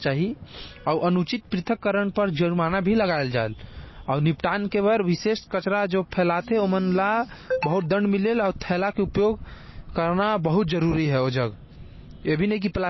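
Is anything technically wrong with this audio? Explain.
Yes. Throughout the speech there is plainly audible MP3 compression damage, likely from a very low bitrate around 24 kbps. Nothing remains above 5.8 kHz, and weak frequency lines flicker between frames, giving a watery swirl and metallic chirps on s sounds. That flickering is what separates it from a simple low-pass filter.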